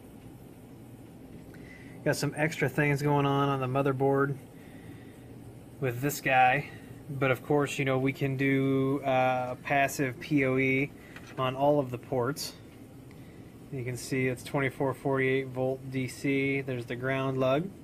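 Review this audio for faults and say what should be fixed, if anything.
At 10.79 s there is a block of digital silence lasting about 0.23 ms. A handful of samples drop out and return with no fade. The abrupt jump down and back up creates a sharp edge at each side. Because the gap is so brief, it is heard as a single tick rather than a hole. It should be fixed. To prevent it, make sure every output buffer is filled on time and guard processing against invalid numbers.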